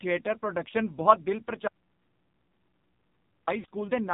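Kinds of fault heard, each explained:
AMR narrowband mobile codec: The audio passed through a 2G/3G-style speech coder that samples at 8 kHz and rebuilds speech from a vocal tract model and sparse pulses, so nothing above 4 kHz survives. The damage is heavy, with a buzzy, synthetic tone that fits a very low bitrate near 5.9 kbps.
Lost AMR speech frames: Transmission errors corrupted frames, so the decoder filled the gap by repeating its last good pitch and vocal tract settings at falling gain. From 3.60 to 3.65 s, about 40 ms of sound smears and dips, which fits two consecutive 20 ms frames.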